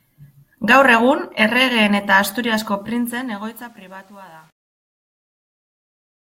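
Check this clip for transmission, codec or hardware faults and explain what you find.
There's one real problem here: truncation distortion on the fade. From 2.76 s to the end at 6.36 s, the speech fades out, but the level stage isn't dithering and is holding too few bits, which fits something like a 9-bit path. As the signal drops toward the last few steps, the waveform turns blocky, so from 3.41 s onward the tail gets gritty.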